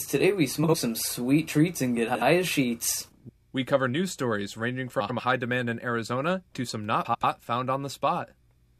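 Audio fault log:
0.64–0.74 s, 2.07–2.22 s, 5.0–5.2 s, 7.05–7.24 s and 8.4–8.58 s, frames out of order: two neighbouring blocks of 46 to 93 ms play swapped, so each stretch flutters garbled, no time lost.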